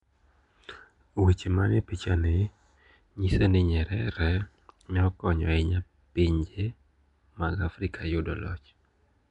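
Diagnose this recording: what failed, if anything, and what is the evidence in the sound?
Codec stage, all the way through: rough hissy halo, smeared underwater speech, nothing above 10.6 kHz. Likely Nellymoser compression starving weak bands and noise-filling them.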